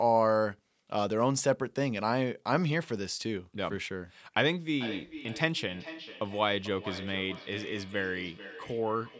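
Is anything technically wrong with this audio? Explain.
Yes. From 4.74 s to the end at 9.19 s there is feedback echo between two devices. Two devices on the same call are in one room, so one plays what the other's microphone sent and that microphone picks it up again. Neither echo canceller removes the other device's playback. Each stretch of speech returns roughly every 0.4 s, at its loudest about 15 dB below the direct speech. On a waveform this shows as fainter copies trailing each burst at a steady spacing. On a spectrogram the same patterns repeat at that interval, all confined below 8 kHz by the call's microphone processing.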